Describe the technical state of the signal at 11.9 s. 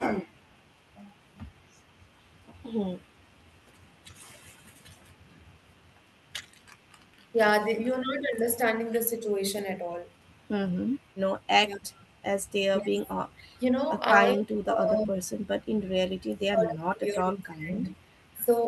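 At 11.9 s two faults overlap. An echo leak runs from 10.26 to 13.58 s: a very faint copy of the speech trails it by 242 ms, most likely from a loudspeaker echo the far end's canceller failed to remove. The fixed lag and faint, separate copy mark it as returned audio rather than room reverberation.

Starting at 11.63 s and continuing to 18.52 s, the loudspeaker side's speech is suppressed in double talk. The level sinks in pieces by as much as roughly 25 dB, adding up to around four seconds, likely because the canceller mistook overlapping talk for echo and turned everything down. These are gain dips while both sides talk, not dropped packets.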